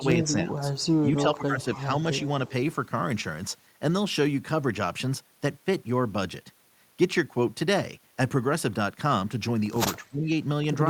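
From 0.0 to 0.53 s, the echo canceller, likely caught by both sides talking at once, turns both its own talker and the echo down: speech suppressed in double talk, dipping the speech by about 10 dB. Inside that stretch, at 0.23 to 0.27 s, an echo leak appears. A loudspeaker echo that one side's canceller likely failed to remove comes back as a copy delayed by 284 ms, about 15 dB below the speech. It returns faintly at 0.75 to 0.89 s, about 30 dB down. The suppression recurs from 1.04 to 1.82 s, again about 10 dB deep. Another brief leak follows at 2.18 to 2.22 s, about 25 dB down. A final suppression at 9.99 to 10.3 s pulls the speech down by about 15 dB.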